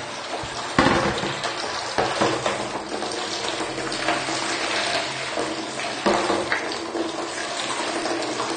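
Throughout the whole clip the sound is dull and smeared, with a watery, fizzy texture in the upper range and a lowered top end, which is likely AAC compression: AAC-LC quantising its spectrum hard enough to punch holes in the highs, consistent with roughly 32 kbps.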